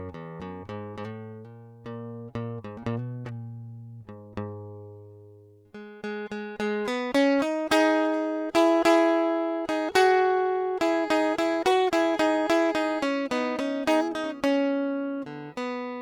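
No technical faults are audible.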